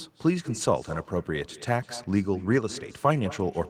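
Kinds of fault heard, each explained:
Echo with no canceller: the far microphone picks up its loudspeaker, so speech returns a fifth of a second later, about 19 dB down, as a distinct repeat, not a reverb tail.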